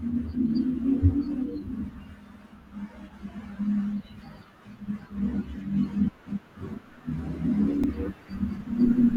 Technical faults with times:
6.61 block of digital silence
7.84 block of digital silence

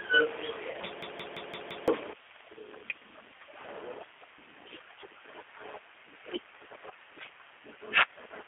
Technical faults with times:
0.00-8.47 G.729 codec
0.71-0.77 VoIP packet loss concealed by the speech codec
1.02-1.88 system hang loop

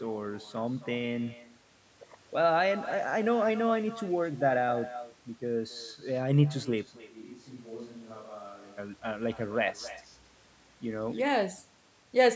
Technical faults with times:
0.00-12.36 echo with no canceller
7.00-8.77 switch to a distant microphone

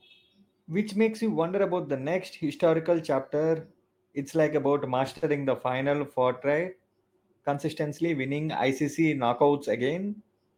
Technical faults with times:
5.17-5.26 short stall from a late packet

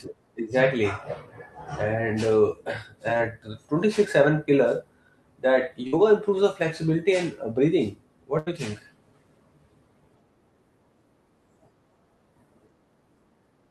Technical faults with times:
3.17-3.21 short concealed packet loss
5.87-5.94 burst of packet loss
8.38-8.48 burst of packet loss

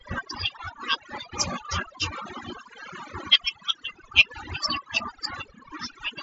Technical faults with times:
0.00-6.22 overdone noise removal

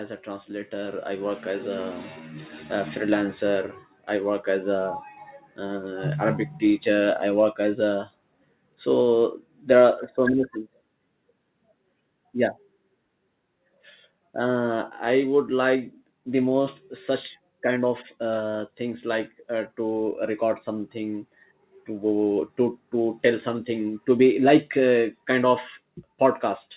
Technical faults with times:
0.23-8.90 automatic gain rising
6.22-16.62 automatic gain falling

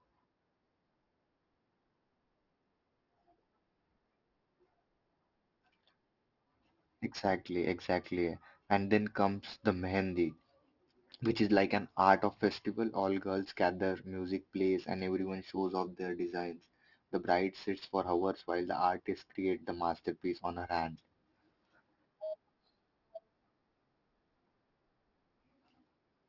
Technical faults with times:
0.00-26.28 aliasing

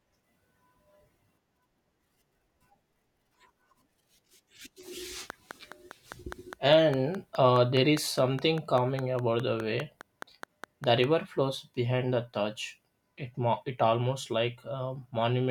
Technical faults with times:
5.30-11.05 train of clicks

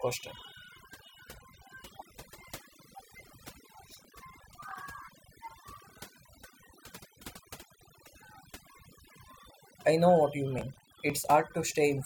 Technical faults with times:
0.00-12.05 overdone noise removal
3.84-4.76 processor overload crackle
10.58-11.30 processor overload crackle

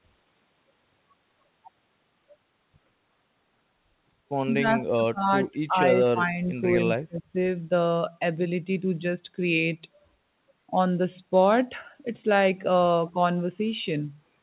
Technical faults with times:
4.57-6.42 speech suppressed in double talk
7.04-7.35 speech suppressed in double talk

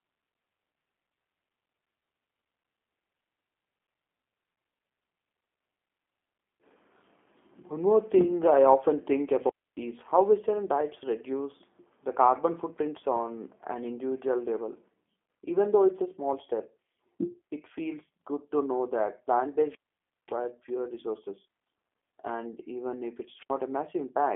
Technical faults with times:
0.00-24.36 G.729 codec
9.38-9.82 wireless microphone squelch dropout
23.35-23.54 wireless microphone squelch dropout

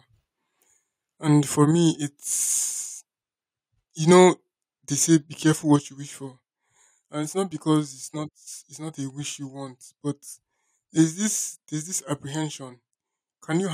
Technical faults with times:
1.71 microphone volume stepped down
4.17-4.23 microphone overload
5.76 microphone volume stepped down

